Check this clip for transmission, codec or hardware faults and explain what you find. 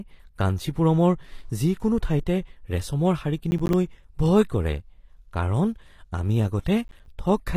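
Two faults are present: codec damage across the whole speech clip, and two short bursts of crackle.

HE-AAC compression runs throughout and is the likely cause of the rebuilt treble. The codec keeps only the lower spectrum and synthesises the top by copying lower bands upward under a coarse envelope. The damage is plainly audible: sibilants come out gritty and lispy, with harmonics that don't line up above the crossover. This fits a low bitrate of around 24 kbps.

Processor overload crackle occurs from 3.51 to 3.73 s and again from 6.85 to 7.06 s. Each burst sounds like a run of about five buffers of roughly 10 ms that weren't finished in time. Every missed buffer drops out to silence with hard edges, so the gaps chop the speech into a quick tearing crackle that stops as soon as the load eases.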